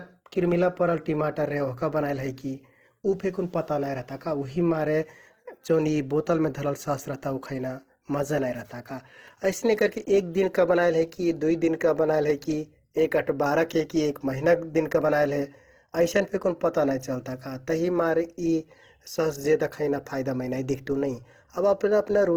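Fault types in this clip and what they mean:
Opus compression: the speech was likely encoded with Opus in its transform mode at a rate that fits around 16 kbps. Starved bands get refilled with folded or noise-like content, so the speech sounds plainly grainy and rough, while the band still reaches 20.2 kHz.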